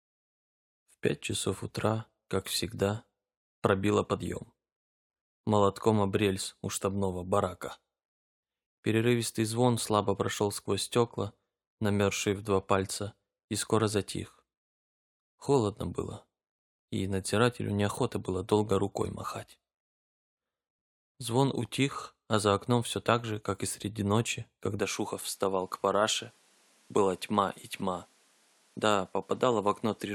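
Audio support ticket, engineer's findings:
Input switched to a poorer device, 24.8 s to end. Top end gone above 13 kHz, new background noise well under speech, no gap, level steady. Likely input-device change; fresh noise floor separates it from plain low-pass or codec change.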